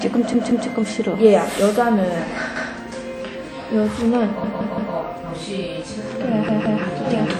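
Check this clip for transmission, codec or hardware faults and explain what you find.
Three kinds of fault are audible: codec damage throughout, four buffer stutters, and a doubled copy of the sound near the end.

WMA compression, throughout: the sound has the ringing, washy smear and signal-following hiss of a transform codec. This is likely an early WMA encoder at a low bitrate, around 48 kbps, with nothing above 19.8 kHz.

Repeated buffer, at 0.34–0.68 s (two extra plays), 2.56–2.73 s (one), 4.44–4.95 s (three) and 6.49–6.83 s (two): audio arrived late, so the device replayed its last chunk. Each repeat is a hard-joined 171 ms piece, which fits an 8192-sample buffer, and it is heard as a stutter.

Doubled audio track, from 7.05 s to the end: a second full-band copy at roughly equal level trails about half a second behind, with no decay or room colour. It enters abruptly, likely from a second, slower capture path.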